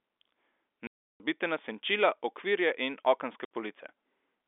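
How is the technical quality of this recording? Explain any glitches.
The recording has two dropouts from packet loss filled with silence. From 0.87 to 1.20 s (330 ms, ending before "na senčila") and 3.45 to 3.50 s (60 ms, after "in okenske"), missing packets were replaced by silence. The gaps fit 30 ms packets and have hard edges. The narrowband telephone band of G.711 coding is audible throughout.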